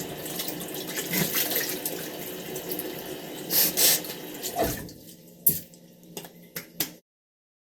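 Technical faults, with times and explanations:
No technical faults are present in this audio. Near the end the level fades out smoothly, as an editor would, from about 7.0 s to 7.02 s.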